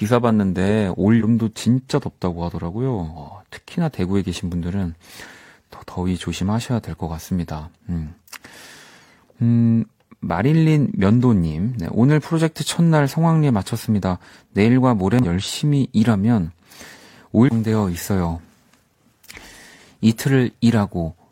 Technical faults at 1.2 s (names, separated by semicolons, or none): damaged data in a compressed stream